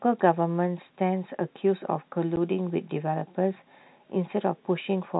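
At 2.36 s the speech drops out for 10 ms. This is packet loss filled with silence. One chunk of audio never reached the receiver, and it played digital silence in its place. The gap's length points to a single lost packet of about 10 ms. The sound stops and restarts abruptly within the telephone-band audio. That band is cut off at 4 kHz by the G.711 coding.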